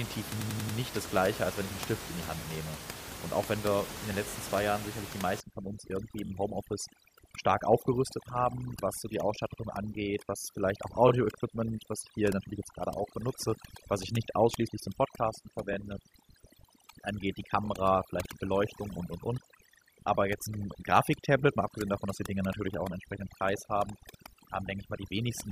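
From 0.40 to 0.77 s, just before "das gleiche als wenn", repeated frames: a 93 ms block replays four extra times, a stutter adding 0.37 s. From 5.40 s, after "sicherlich die", overdone noise removal strips bands near the noise floor, leaving twinkling specks. Shorter repeats stutter at 6.25–6.30, 9.52–9.59, 11.08–11.10, 15.72–15.75 and 17.65–17.67 s.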